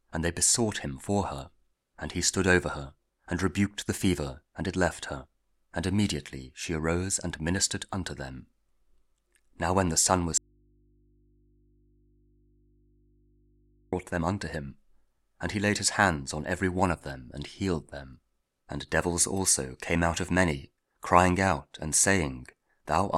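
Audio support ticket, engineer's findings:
Audio dropout to a faint residue, 10.38 to 13.93 s (about 3.5 s). Signal cuts abruptly to mains hum roughly 35 dB below programme level, then returns mid-flow. Likely cause: the source was lost upstream while the downstream path stayed live, leaving an open input that picks up hum. The waveform shows a hard step down to a thin, steady band with no fade. The spectrogram shows a broadband gap with only low hum lines across it.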